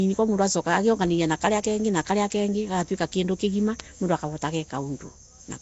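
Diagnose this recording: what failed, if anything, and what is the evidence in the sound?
The fault sits at the codec stage. Throughout, the speech carries plainly audible Nellymoser compression, likely at a rate consistent with 32 kbps. Coarse two-bit coding starves weak bands and fills them with noise, leaving a hissy, smeared, underwater quality and nothing above 7.7 kHz.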